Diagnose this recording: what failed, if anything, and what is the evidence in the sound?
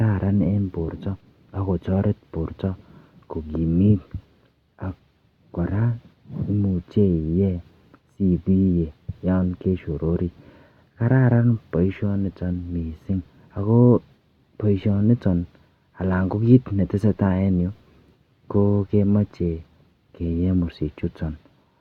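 Nothing failed; no fault is audible anywhere in the recording.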